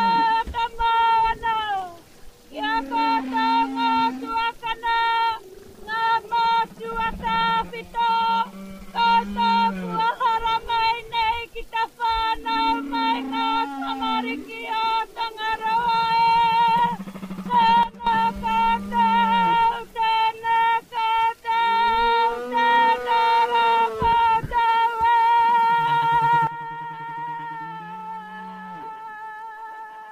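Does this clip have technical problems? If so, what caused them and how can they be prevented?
Yes: sudden gain jumps drop the sound and noise floor together by about 12 dB at 17.83–18.07 s and about 14 dB from 26.47 s to the end, likely from unramped gain changes. The waveform shows abrupt step-downs. Prevent this by ramping gain changes over several milliseconds.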